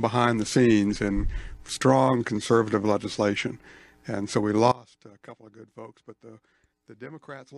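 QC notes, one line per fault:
4.72 s to the end: sudden gain jump. The level falls by about 21 dB between one sample and the next and stays down for the rest of the clip, likely a gain setting or bit shift applied with no ramp. Unlike a fade, there is no gradual slope, and unlike compressor pumping or a dropout, the background noise sinks by the same amount as the foreground and the sound carries on at the new, lower level.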